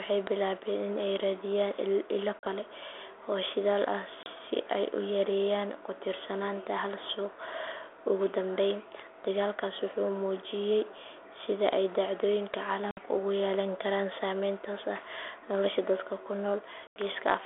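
Packet loss on an ADPCM call strikes four times: at 2.39 s (40 ms), at 4.23 s just after "oo shidaal ah" (30 ms), at 12.91 s after "muujiyay sida ay dhacdooyinka" (60 ms), and at 16.87 s (90 ms), each a run of several packets. Silence fills each gap, and the receiver's adaptive predictor and step size lose track of the sender's. So every sharp-edged hole ends with speech resuming slightly and briefly distorted before the 32 kbit/s G.726 decoder resynchronises.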